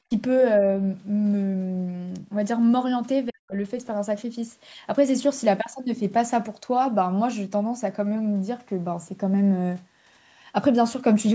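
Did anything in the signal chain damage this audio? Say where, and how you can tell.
Yes. Speech suppressed in double talk in the call processing is the likely cause of two abrupt drops: about 35 dB at 0.07–0.11 s and about 40 dB at 3.28–3.54 s. On a waveform they appear as sharp notches, and on a spectrogram as near-empty vertical bands. Unable to separate this talker from loudspeaker echo, the echo canceller attenuated both.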